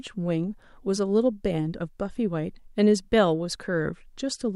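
Speech recording with no audible technical faults to report.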